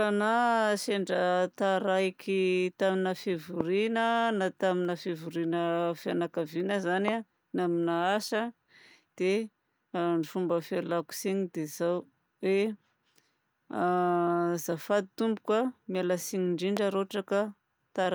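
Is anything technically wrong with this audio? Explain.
Yes, there are three loud pops: at 3.61 s just after "sendra taraiky tamina", at 7.08 s after "na tamina fivoriana fianakaviana" (the strongest, about 20 dB over the speech), and at 16.77 s. Each is a single sharp click of about 20 ms that jumps roughly 15 dB or more above the speech, which continues underneath. They're likely from a sudden voltage spike, such as a plug, switch, static discharge or driver glitch, hitting the signal chain.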